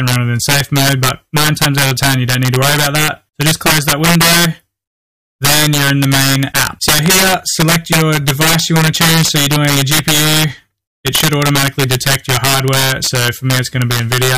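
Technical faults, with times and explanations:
Throughout, integer overflow: driven about 10 dB too hot, about 3 percent of samples go past the limit and wrap to the opposite sign, producing violent cracks far sharper than clipping.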